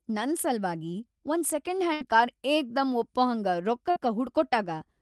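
At 1.93 s there's a burst of packet loss: about 72 ms is papered over by stretching and fading the last sound, then it jumps ahead, skipping about 80 ms. Same again at 3.91 s right after "ಏಕ್ದಂ ಒಪ್ಪಹಂಗ", a 51 ms fill with 60 ms lost.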